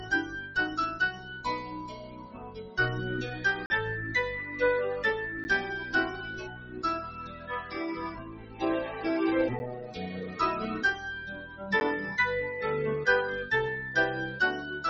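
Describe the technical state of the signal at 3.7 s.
Right at 3.7 s you're at the tail of a block of digital silence running from 3.66 to 3.70 s, a 40 ms hole where the sound drops straight to silence. Most likely the output buffer wasn't filled in time. There's no fade in or out, so the sound cuts out and comes back abruptly at 3.7 s. At that length it comes across as a short dropout rather than a single tick.

The noise suppressor applied to music or sounds is also active across the whole clip, and it affects what comes back after the gap. It's a speech-style suppressor treating sustained tones, ambience and reverb tails as noise, pulling them down by about 10 dB while transients slip through. So the material resuming at 3.7 s has thinned, sinking sustains and a pumping flutter instead of a steady tail.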